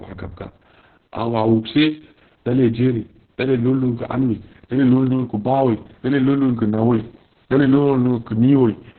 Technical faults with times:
0.00-8.98 Opus voice compression

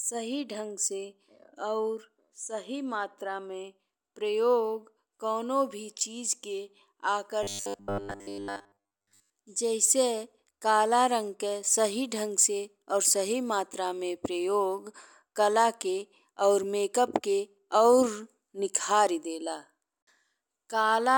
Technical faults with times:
7.43-9.30 robotic sound from repeated short buffers

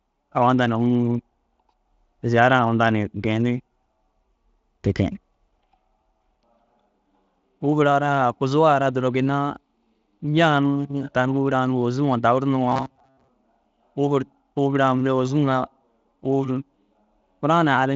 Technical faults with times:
12.72-13.28 robotic sound from repeated short buffers

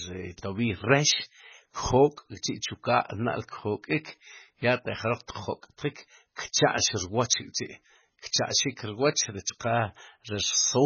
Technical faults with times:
0.00-10.85 MP3 compression

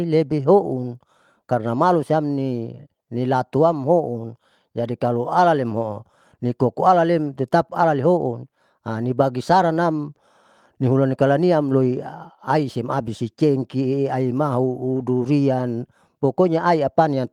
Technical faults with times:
none

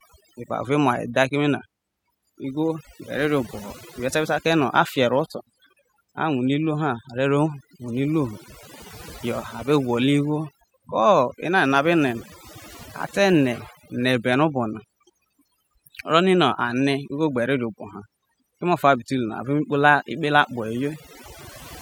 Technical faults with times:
0.00-21.81 overdone noise removal

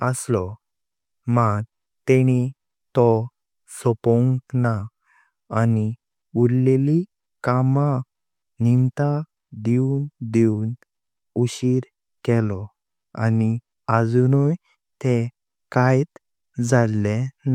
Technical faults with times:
none

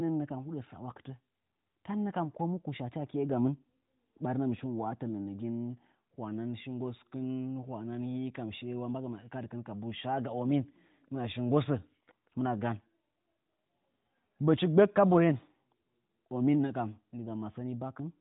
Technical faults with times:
none

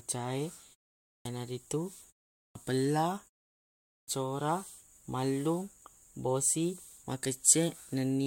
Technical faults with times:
1.11-1.25 clipped start after a pause
2.41-2.55 clipped start after a pause
3.92-4.08 clipped start after a pause

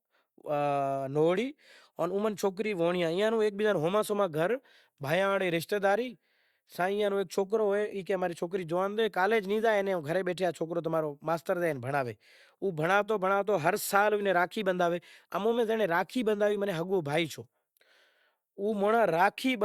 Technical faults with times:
none

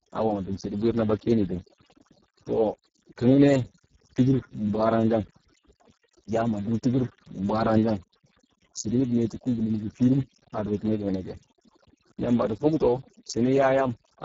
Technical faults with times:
0.00-14.25 overdone noise removal
0.00-14.25 Speex codec

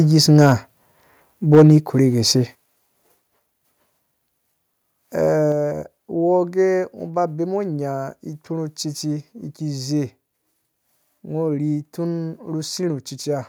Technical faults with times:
0.31-0.45 microphone overload
1.54-1.73 microphone overload
1.55 microphone volume stepped down
2.55 microphone volume stepped down

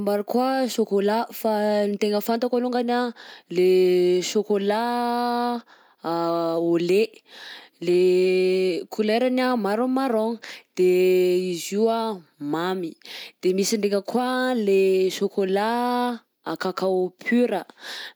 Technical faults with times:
none

